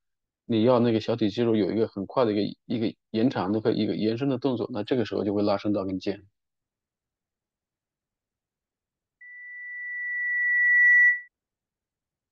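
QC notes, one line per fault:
9.21–11.28 s, loudspeaker feedback squeal: a single tone at 2 kHz swells over about one and a half seconds to roughly 10 dB above the speech as the microphone-to-loudspeaker loop exceeds unity gain there. Its growth, not a fixed onset, separates it from an interfering whistle.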